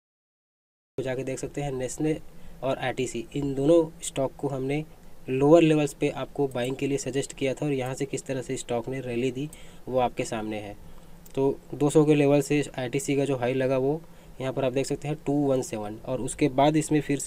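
For the first 0.98 s there is only digital silence, and then the sound bursts in at full level already partway through, with no attack or fade-in. This is a cut-off start: capture or the stream began late, missing the opening of the sound.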